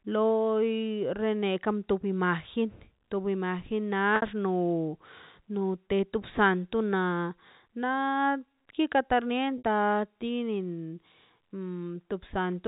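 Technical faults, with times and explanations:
4.16 to 4.22 s and 9.58 to 9.63 s, packet loss with pitch repetition: About 60 ms drops out each time, the second just after "kikar ta". This fits three 20 ms packets lost. The receiver repeats the last pitch period to fill each gap, so the sound briefly holds as a buzzy tone that fades before the speech resumes, all over the narrow G.711 telephone band.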